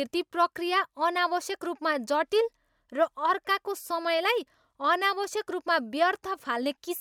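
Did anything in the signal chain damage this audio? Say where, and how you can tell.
No, no fault is audible.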